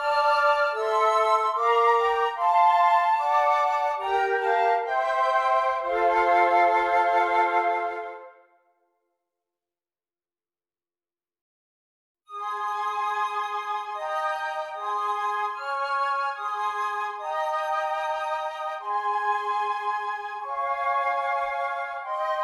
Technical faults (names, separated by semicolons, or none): none